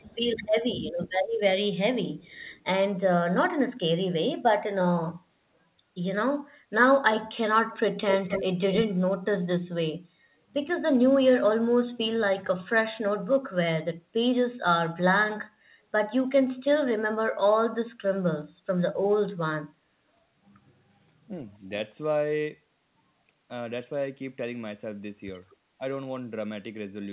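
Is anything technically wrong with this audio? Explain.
Yes. There is echo leak, speech suppressed in double talk and brief background gating by the echo canceller, all heard over a telephone-band call path with nothing above 4 kHz.

Echo leak appears at 0.0–0.46 s, 1.09–1.39 s and 2.22–2.64 s as a faint delayed copy of the speech, about 273 ms behind and about 35 dB down. At 8.1–8.8 s it returns much louder, about 5 dB below the speech, with a 251 ms delay. This is likely a loudspeaker-to-microphone path on the far end that the canceller did not fully cancel. Unlike room reverberation, the repeat is a distinct copy a quarter-second late, not a smooth decaying tail.

Speech suppressed in double talk runs across 0.0–0.99 s, overlapping the first echo. The talker's level dips in pieces, by roughly 20 dB at its deepest, for around half a second in total. The likely cause is a canceller that couldn't separate the local talker from the returning echo and so attenuated both. 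What distinguishes it from background gating is that the speech itself sinks or chops.

Background gated by the echo canceller occurs at 10.2–10.28 s. The room tone drops by up to 9 dB for roughly 50 ms, then comes straight back as the canceller releases the microphone. It is a short dip in the ambient bed rather than a full dropout to silence.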